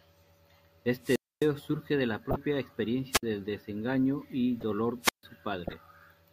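A swell of hiss followed by a hole of near silence runs from 1.01 to 1.50 s, with about 260 ms fully muted. This is a wireless microphone squelch dropout: the analogue FM radio link faded until the receiver's squelch shut the output, and the sound came back once the signal recovered. At 2.31 to 2.36 s a fairly loud chirp-like burst cuts in, a corrupt frame decoded. Damaged bits in a couple of compressed frames were played anyway, throwing energy into the wrong frequencies. At 3.11 to 3.23 s a shorter squelch dropout leaves a gap of about 58 ms. At 4.60 to 4.63 s there is another corrupt frame, this one a faint blip spanning a couple of frames. From 5.01 to 5.23 s a third dropout brings the hiss and a silence of about 143 ms. Finally, 5.64 to 5.73 s has the longest corrupt-frame event, a distinct squeaky burst smeared across several frames.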